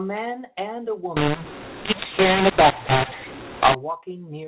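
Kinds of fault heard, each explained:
mu-law and A-law mixed up: from just after "and a", about 1.17 to 3.75 s, mu-law audio gets decoded as A-law, so levels scramble, speech turns harsh and the gaps fill with noise.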